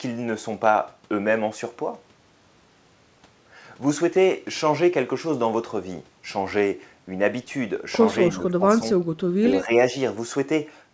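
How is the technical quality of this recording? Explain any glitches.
The recording has three brief dips in level near the end, and its audio band stops at 8 kHz, which fits a wideband call codec such as G.722. Speech suppressed in double talk occurs from 8.31 to 8.82 s, 9.41 to 9.45 s and 9.62 to 9.76 s. When both sides talked at once, the echo canceller likely mistook this talker for loudspeaker echo and turned the speech down by up to about 15 dB, so it briefly fades and chops.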